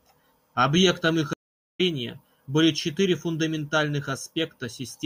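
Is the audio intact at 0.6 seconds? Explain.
Yes, at 0.6 seconds the speech plays through cleanly, with no dropout, click, distortion or other fault audible at that moment.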